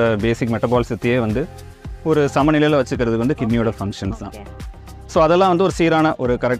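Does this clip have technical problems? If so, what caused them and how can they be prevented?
No, no technical problems can be heard in this clip. There is nothing here that calls for a cause or a fix.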